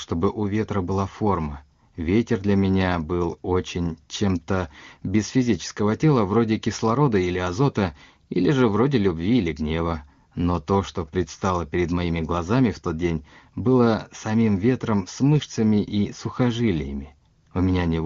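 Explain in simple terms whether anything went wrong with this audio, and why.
Nothing went wrong that I could hear: this speech recording, carried over an HD Voice phone connection, showed no problems when I listened to it.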